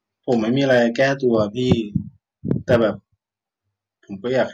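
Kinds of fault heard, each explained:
Hard clipping: the speech peaks drive past what the signal path can carry, by about 2 to 8 dB, so their tops are cut flat. This gives brief crackles at 0.31 s and 1.72 s and a rougher, fuzzy edge across 0.70–1.35 s and 2.51–2.82 s. On a waveform, the peaks in those spans sit squared off against a fixed ceiling. A spectrogram shows bright vertical smears of added harmonics reaching far up the spectrum.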